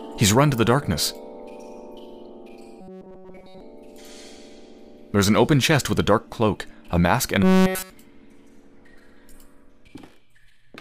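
From 2.81 to 3.60 s and 7.43 to 7.91 s, a rigid 188 Hz metallic buzz replaces the sound: likely robotic sound from repeated short buffers, a roughly 5 ms chunk looping.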